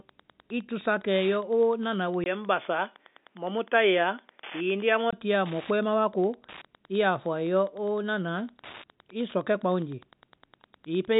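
From start to finish the speech carries Wi-Fi interference: a steady tick every 102.4 ms, close to ten times a second, sitting roughly 25 dB under the voice. A nearby radio's beacon bursts are being rectified by the audio circuit and turned into audible clicks. On a waveform they show as evenly spaced spikes riding on the signal; a spectrogram shows them as thin vertical lines across the band, regularly spaced, even through pauses.

At 2.24 s the sound turns dull and boxy, and it clears again at 5.13 s, most likely because the input switched to a poorer device for that stretch. Nothing above 3.5 kHz gets through, inside the 4 kHz ceiling of the G.711 telephone coding that carries the whole clip. There is a 20 ms silence at the switch, a new faint noise floor far below the speech, and no obvious jump in loudness. A spectrogram shows the top of the band cut off flat for those three seconds, with a brief blank gap at the change.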